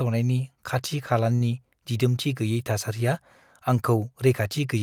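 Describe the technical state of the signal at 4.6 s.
No fault is audible at 4.6 s, and the signal is intact at that point.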